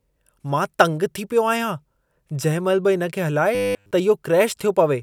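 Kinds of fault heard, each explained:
Robotic sound from repeated short buffers: from 3.55 to 3.91 s the speech becomes a rigid, metallic buzz at 100 Hz that still roughly tracks the words, most likely because fresh audio arrived too seldom and the last 10 ms chunk was replayed again and again over the entire stretch. Unlike a dropout, there is no silence. The fixed buzz pitch is set by the chunk length.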